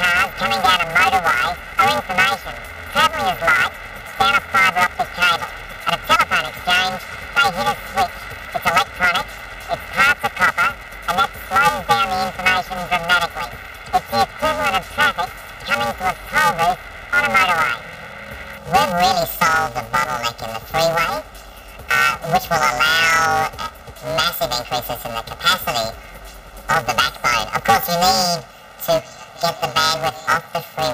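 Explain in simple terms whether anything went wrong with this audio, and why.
Planar audio read as interleaved affects the whole clip, from start to finish. The recording was stored in short chunks holding all the left-channel samples first and then all the right-channel samples, but playback treated them as alternating left-right pairs. The chunks are very short, about 2.9 ms each, which fits a 128-sample block. Instead of a pitch jump, this produces a harsh, robotic buzz repeating about 345 times per second throughout.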